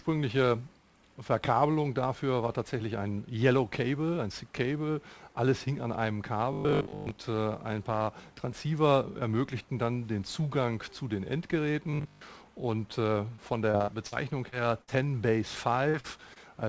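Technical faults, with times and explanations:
6.53–7.11 s and 11.91–12.21 s, robotic sound from repeated short buffers: New audio arrived too rarely, and the gaps were most likely filled by replaying the last 20 ms over and over while most of the real audio was skipped. That repetition imposes a fixed 50 Hz buzz, one over the 20 ms loop length, so the sound turns rigid and metallic and only loosely follows its original shape.
13.36–14.14 s, repeated packet loss (robotic sound): Five separate gaps fell inside this stretch, together about 160 ms of missing audio, the longest 60 ms. Each hole was patched by extending the last sound before the next loss arrived, so about a fifth of the span is substitute audio. The result is choppy, robotic sound with pieces dropped out. Above the damage, the G.722 call path carries nothing above 8 kHz.
14.50–14.54 s, 15.90–15.96 s, 16.00–16.06 s and 16.34–16.38 s, short concealed packet loss: Between 20 and 40 ms of audio missed the decoder each time. 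The receiver continued the preceding sound, following its pitch where there was one and using shaped noise where there wasn't, then blended back into the real signal. Each one is heard as a brief smear or wobble, and a very short sound can disappear.
14.82–14.90 s, burst of packet loss: About 60 ms of consecutive audio was lost or arrived too late to play. The receiver kept the last sound going and faded it as the gap went on, so what was playing becomes a held buzz or a dying hiss. Playback then resumes further along, and the material that belonged in the gap is simply absent.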